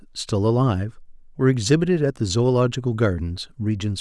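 No technical faults can be heard.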